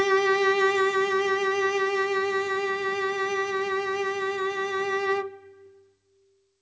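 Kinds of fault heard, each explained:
No faults are audible anywhere in this music.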